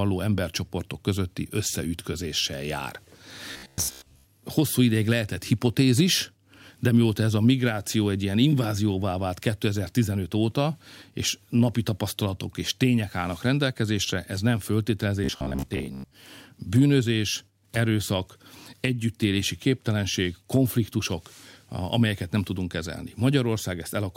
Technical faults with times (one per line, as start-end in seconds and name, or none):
3.53-4.26 robotic sound from repeated short buffers
15.24-16.13 robotic sound from repeated short buffers